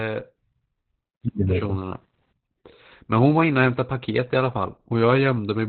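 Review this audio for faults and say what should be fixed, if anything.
Muffled, hoarse and faintly robotic throughout, with nothing above 4.2 kHz: heavy Opus voice compression in narrowband SILK mode, coarse excitation coding consistent with roughly 8 kbps. Encode at a higher bitrate so Opus keeps wideband or fullband coding.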